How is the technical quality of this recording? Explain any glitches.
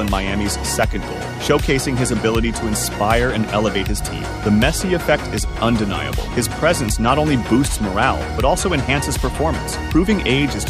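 The recording is marred by mains hum from about 3.18 s to the end. A steady low 60 Hz tone sits only around 15 dB below the material. It comes from power-line interference, typically a ground loop or a nearby transformer leaking into the signal path.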